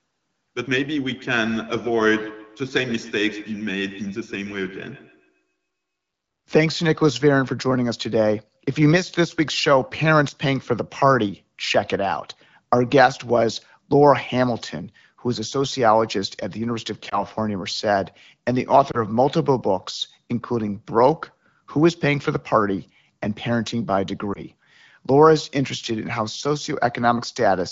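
Speech runs through most of the clip with two faults. From 1.09 to 5.56 s each syllable returns roughly every 150 ms as a thinner, ringing copy, peaking at about 17 dB below the speech. This is feedback echo between two devices: a second device in the room replays the call, and its sound re-enters the first microphone, outside the reach of either echo canceller. Later the sound briefly dips and warbles at 17.09 to 17.23 s, 18.91 to 18.99 s and 24.33 to 24.39 s. These are lost AMR speech frames. Each fits a single corrupted 20 ms frame that the wideband decoder papered over by repeating its last good settings at falling gain before the signal recovered.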